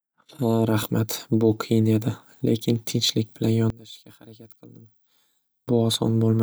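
From 3.70 s to 5.68 s the speech suddenly drops by about 23 dB to a faint copy, then snaps back at full level. The likely cause is one channel inverted: with one stereo side's polarity flipped, the centred voice cancels against itself, leaving only the faint difference between channels. Unlike a plain level dip or gain fault, what both channels share cancels, so the residue is a faint leftover rather than the same sound just quieter.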